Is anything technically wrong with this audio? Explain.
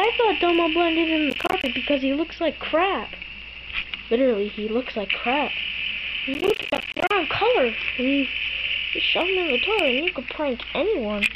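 Yes. Processor overload crackle appears at 1.3–1.66 s and again, longer, at 6.34–7.11 s. Both times the processor falls behind and misses a run of buffer deadlines in quick succession. Each missed buffer, around 10 ms long, drops out to silence with abrupt edges. Strung together, these tiny holes make a gritty, tearing crackle over the sound. The second burst is denser and roughly twice as long. Each burst stops when the load eases.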